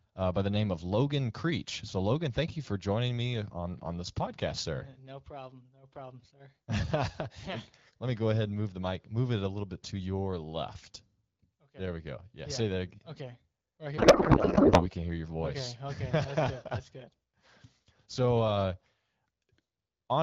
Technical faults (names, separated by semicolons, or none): codec payload misread